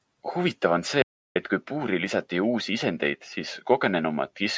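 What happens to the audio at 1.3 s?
At 1.3 s the input signal is missing, most likely because the input device or link dropped out briefly while the recorder kept writing silence. The result is an audio dropout to silence from 1.02 s to 1.36 s: the speech cuts off abruptly, about 335 ms of silence follows, with no room tone or background at all, and the speech resumes mid-flow. Whatever was said during that gap is lost.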